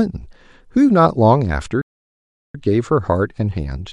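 At 1.81 s the speech cuts out mid-flow and stays silent until 2.55 s, a gap of about 0.73 s, before carrying on. This playback stall likely comes from the player running short of data or its thread being blocked.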